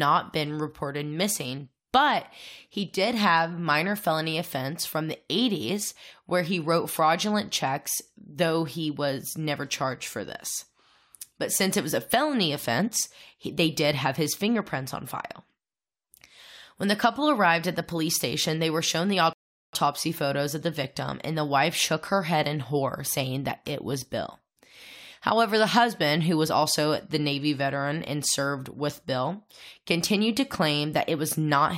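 A rebuffering stall interrupts the speech from 19.33 to 19.73 s: the player exhausted its downloaded audio and halted until more data arrived. The sound drops to silence for about 0.4 s, then picks up exactly where it stopped, losing nothing but adding that time.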